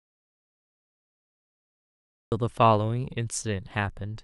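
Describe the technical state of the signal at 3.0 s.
At 3.0 s the speech signal runs intact, with no dropout, click, clipping or other technical fault to be heard.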